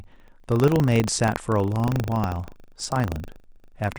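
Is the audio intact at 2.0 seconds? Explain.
No. Buffer tearing runs through the whole clip, including 2.0 s. Writer and reader cross inside each 40 ms period, splicing in a small sliver of audio from roughly 70 ms earlier. This yields a 25 Hz robotic buzz, seen as regular vertical striations on a spectrogram and hard waveform steps.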